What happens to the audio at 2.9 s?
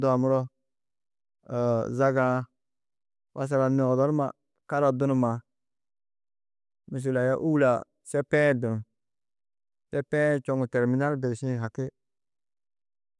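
Nothing goes wrong at 2.9 s; the speech carries on intact through that moment.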